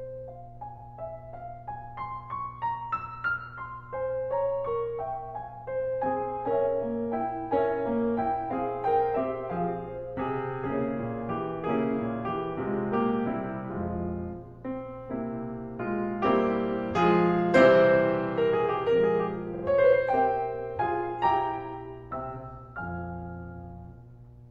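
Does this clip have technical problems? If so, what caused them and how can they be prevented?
Yes. Mains hum runs through the whole clip as a steady 60 Hz tone with low harmonics, sitting roughly 20 dB below the music. Power-line current is leaking into the signal path, most plausibly through a ground loop between connected devices or induction from a nearby transformer, so the tone never varies with the musical material. To prevent it, give all equipment a single common ground and keep audio cables away from power supplies.

Repeated frames appear at 0.75 s and again at 19.51 s. Each time, a block of about 46 ms, which fits one compressed frame, is played more than once: once extra at 0.75 s, and twice extra at 19.51 s, where the repeats run to 19.61 s. The decoder received the same data again and replayed it, producing an audible stutter and stretching the music by about 46 ms and 93 ms respectively. 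To prevent it, verify that the writing or streaming stage discards duplicate frames and checks frame sequence before decoding.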